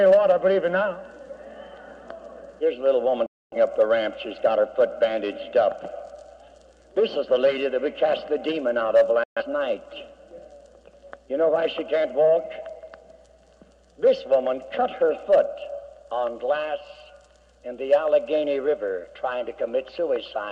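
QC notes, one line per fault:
3.26–3.57 s, digital broadcast dropout: the sound cuts to silence within about 3 ms as the receiver mutes on failed frames, consistent with roughly six frames lost. Whatever was sent during the gap is gone.
9.23–9.42 s, digital broadcast dropout: the same abrupt mute, a shorter gap suggesting about three bad frames, before clean reception resumes.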